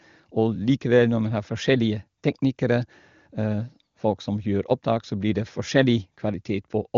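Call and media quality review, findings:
Nothing to flag here: the speech comes through the AMR wideband (HD Voice) codec with its top end stopping a little above 7 kHz, and the coding sounds like one of the upper AMR-WB rates.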